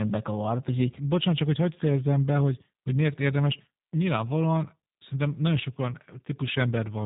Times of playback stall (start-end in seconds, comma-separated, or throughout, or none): none